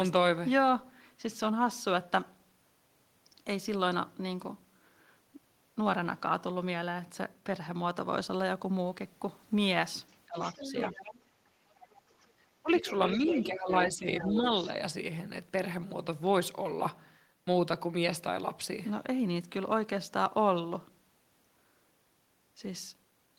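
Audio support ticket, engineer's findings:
Other side's voice leaking through, 10.09–11.2 s, 11.81–12.01 s, 12.75–13.43 s, 14.19–14.5 s. Second voice audible under the near talker, around 10 dB down, faint at 11.81 s. Likely residual loudspeaker echo the canceller failed to subtract from the mic.

Speech suppressed in double talk, 10.27–10.65 s, 12.62–12.83 s, 13.17–14.47 s. Near talker dips or drops in pieces while the far side talks, deepest around 20 dB in the 10.27 s event, shallower later. Likely canceller suppressing both voices when it can't separate them from echo.

Background gated by the echo canceller, 12.28–12.34 s. Room tone drops about 8 dB for roughly 50 ms, then recovers. The canceller clamped mic gain during loudspeaker playback and released once activity stopped.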